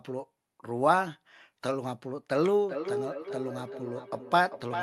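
From 2.68 s, feedback echo between two devices: another device's playback re-enters the microphone, so speech returns roughly every 0.4 s, thinner, about 7 dB down.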